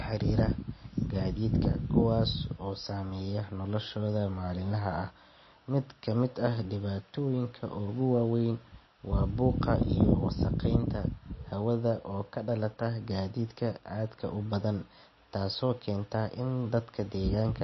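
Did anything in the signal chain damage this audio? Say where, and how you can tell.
Yes, at the codec stage. Throughout the speech nothing exists above 5.8 kHz, and the sound is plainly watery and swirly, likely from MP3 compression at a low bitrate near 26 kbps. A spectrogram shows a flat ceiling at 5.8 kHz, with patchy, flickering gaps below it.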